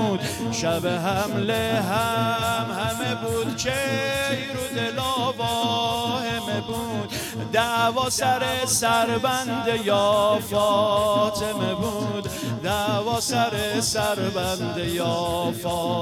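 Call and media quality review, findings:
Hiss and roughness riding on loud, bright passages, gone in silence, throughout. Sample clock jitter at the converter, around a microsecond, error roughly 35 dB below signal.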